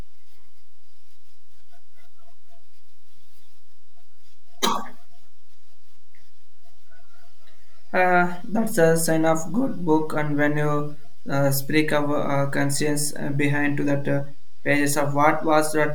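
A speech recording carries a DC offset for its full length: the waveform sits shifted off zero by a constant of about -23 dBFS. Unlike rumble or hum, it makes no audible low tone. It shows only as steady energy at 0 Hz and as lost headroom on one side.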